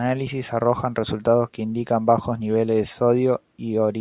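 No technical faults are audible.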